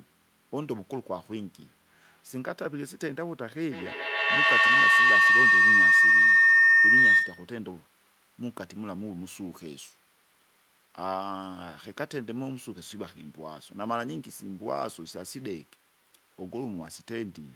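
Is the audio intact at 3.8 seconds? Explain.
No, a feedback howl runs from 3.72 to 7.6 s. A microphone-to-loudspeaker loop gains level each trip, so repeats roughly every 150 ms build into a tone near 2 kHz, peaking about 14 dB above the speech. Echo repeats would fade instead.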